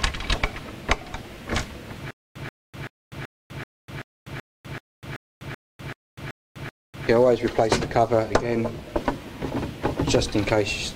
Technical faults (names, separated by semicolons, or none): stutter with silent gaps